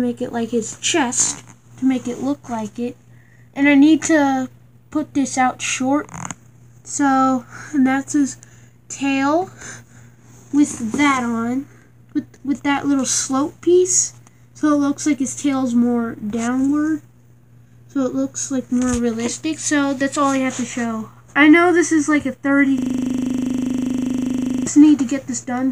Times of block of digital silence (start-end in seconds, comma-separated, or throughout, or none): none